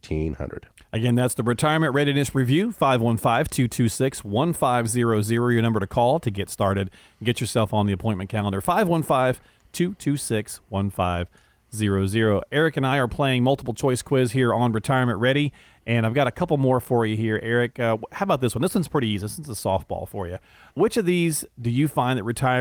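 No technical faults are audible anywhere in this speech recording.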